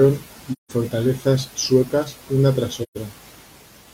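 AAC frame loss with muting hits at 0.52 to 0.72 s and 2.83 to 2.97 s. Zeroed frames leave soft-faded silences, seen as blank spectrogram columns and tapered waveform dips.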